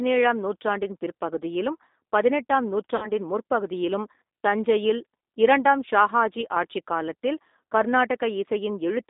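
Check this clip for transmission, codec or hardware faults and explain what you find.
Two faults are present, one running through the whole clip and one brief dropout.

G.729 codec, throughout: the 8 kbit/s model-based coding leaves speech rough and synthetic within a 250 Hz to 3.7 kHz band, unlike plain band-limiting, which stays clean.

VoIP packet loss concealed by the speech codec, 2.96 to 3.10 s: about 60 ms of audio, consistent with two lost packets, is extrapolated from the last pitch and filter with the gain lowered frame by frame, so it fades. The weakness lingers afterwards, which distinguishes it from a clean silent gap.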